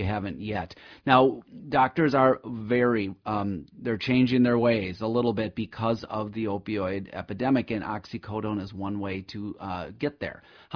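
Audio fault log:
No audible faults across the speech.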